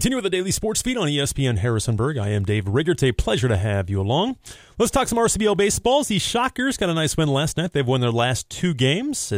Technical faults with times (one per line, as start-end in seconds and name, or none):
none